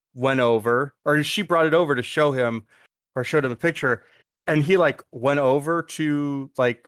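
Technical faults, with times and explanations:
3.37 to 6.55 s, call bitrate drop: the speech turns rough, watery and muffled, at its worst for 1.37 s, then clears. A falling bandwidth estimate forced the encoder onto far fewer bits, consistent with roughly 40 down to 15 kbps, so it codes coarsely and loses the highs.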